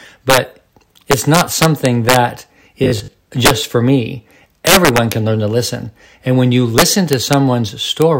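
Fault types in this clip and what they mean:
integer overflow: Loud samples past the integer limit wrapped to the opposite sign instead of limiting, so peaks up to about 7 dB over burst into violent cracks.
robotic sound from repeated short buffers: Audio likely arrived too seldom and a short buffer was replayed; the rigid 50 Hz metallic buzz from 2.84 to 3.2 s fits 20 ms repeats.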